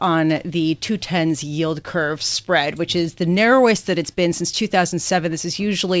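No technical faults are audible.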